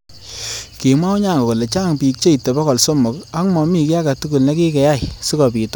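No technical faults are audible anywhere in the speech recording.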